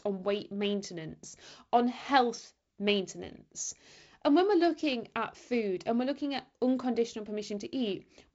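Nothing stood out on listening to this speech clip, which carries the restricted top end of G.722 wideband telephone coding.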